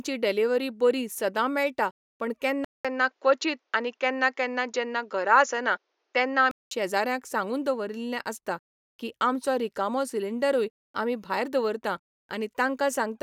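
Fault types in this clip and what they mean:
Input switched to a poorer device: from 2.65 to 6.71 s the speech turns duller, nothing above 7.2 kHz, after a 200 ms silence, likely a change of microphone.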